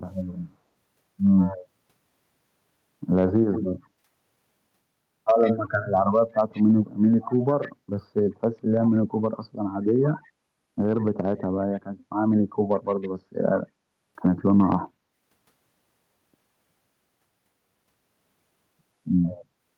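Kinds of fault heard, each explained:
Echo leak: a faint copy of the speech trailing it by about 145 ms, well below the direct level, in brief scraps near 1.4 s, 3.3 s and 19.3 s and sustained from 5.43 to 13.09 s, likely a far-end echo canceller passing residual loudspeaker pickup.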